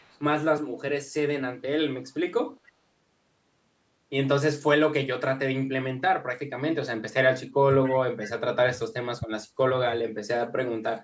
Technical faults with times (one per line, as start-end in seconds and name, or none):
0.00-0.18 echo leak
7.84-7.96 echo leak